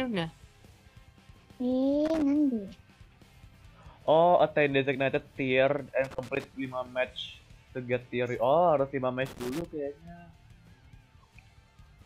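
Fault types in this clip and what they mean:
Loose connector crackle: a worn contact making and breaking chops the signal. Irregular crackle bursts appear at 2.05, 6.04 and 9.26 seconds.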